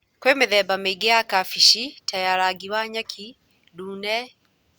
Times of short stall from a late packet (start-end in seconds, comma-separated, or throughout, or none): none